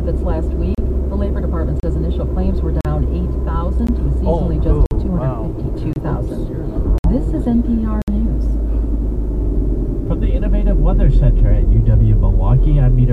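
Gaps between stream segments cut in at 0.75, 1.80, 2.81, 3.87, 4.86, 5.93, 6.98 and 8.02 s, roughly once a second. Segment timestamps fail to meet, so the player inserts silence lasting 15 to 60 ms. Each sounds like a hard dropout, and on a waveform or spectrogram it shows as a flat, empty vertical strip with sharp edges.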